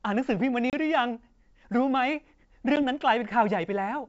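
Speech carried over wideband G.722 shows packet loss on an ADPCM call: hard silent gaps at 0.70–0.74 s (about 30 ms, a few packets) and 2.76–2.83 s (about 10 ms, a single packet). Unlike a plain dropout, each gap ends with slightly distorted speech while the decoder's predictor resynchronises.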